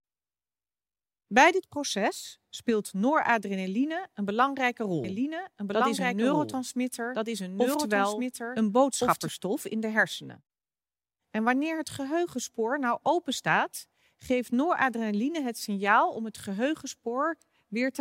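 From 5.04 s to 9.28 s the speech is heard twice. This is a doubled audio track. A second full-band copy runs about one and a half seconds behind the original. It is roughly 5 dB quieter. It has no decay and no room colour. It cuts in abruptly at the start and out abruptly at the end. The likely cause is a second capture through a slower path, or an edit holding two copies out of step.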